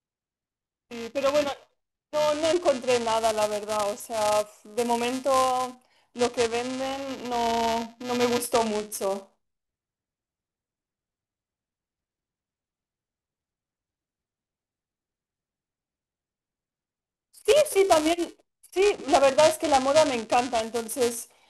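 From start to finish the speech carries a robotic buzz at 375 Hz, and that's buffer tearing. The writer and reader of the ring buffer have slipped, which fits a 128-sample buffer, so a small slice of each period plays audio a few milliseconds stale, with hard joins.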